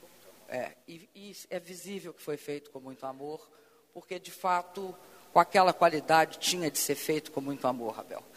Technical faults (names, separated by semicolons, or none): zipper noise